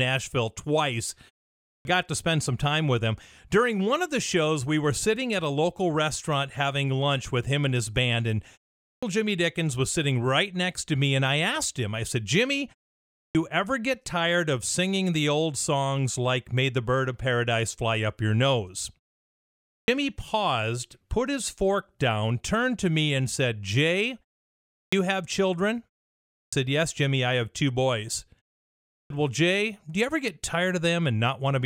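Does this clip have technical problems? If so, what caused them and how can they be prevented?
Yes. A clipped start after a pause occurs at 1.66, 8.84, 13.16, 19.68, 24.72, 26.34 and 28.91 s. The output device sleeps during each silence and needs about 0.18 to 0.20 s to wake, so onsets such as "got to spend some" begin abruptly. Muted pauses would only drop the background, but here speech itself is lost. Keeping the output device active through silences would prevent it.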